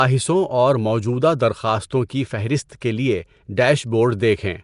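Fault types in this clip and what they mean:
Nellymoser compression: a rough, hissy, underwater-sounding haze with nothing above 10.6 kHz, likely from Nellymoser Asao's fixed low bit budget filling starved bands with noise.
pre-echo: brief hiss blurs sharp onsets at 2.09 s and 2.81 s, arriving 10 to 12 ms early, as block-wide quantisation noise leaks ahead of each attack.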